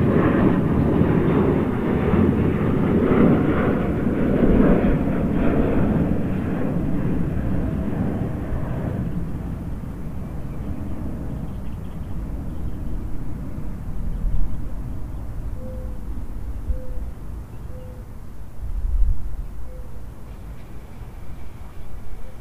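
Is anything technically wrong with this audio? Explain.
No, nothing technically wrong can be heard here.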